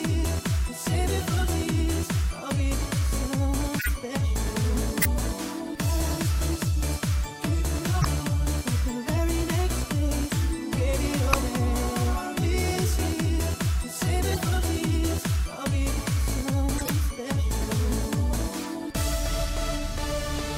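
Corrupt frames decoded at 3.79–3.89, 5.02–5.06, 8.01–8.05, 10.30, 11.31–11.34, 14.32–14.41, 16.78–16.89 and 18.59–18.66 s: damaged compressed frames were decoded anyway, misplacing energy across frequencies and producing brief chirps, blips, noise bursts or gaps.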